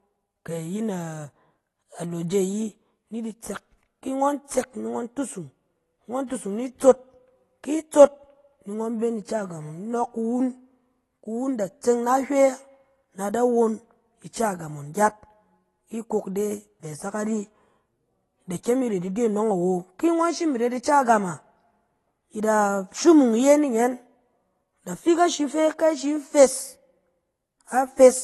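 Speech running the full length carries AAC compression damage, plainly audible from start to finish. Nothing is present above 12 kHz, and sibilants turn fizzy and smeared while sustained vowels warble. That points to a lossy codec starved of bits, likely AAC-LC at around 32 kbps. A simple low-pass filter would cut the highs cleanly without the swirling, noise-filled texture, and MP3 at this rate tends toward a harsher, more metallic sound.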